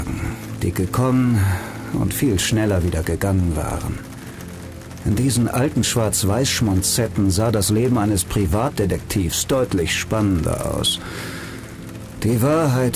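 No technical faults are audible anywhere in the clip.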